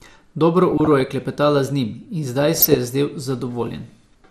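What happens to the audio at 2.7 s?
Right there you get DAB burbling, from about 2.55 to 2.77 s. Bit errors slip past error correction and corrupt samples and scale factors, so single sub-bands blip with noise and jump in level. Underneath, the whole clip sounds dull and gurgly, which is likely MP2 compression at a low rate, roughly what an 80 kbps stream would give.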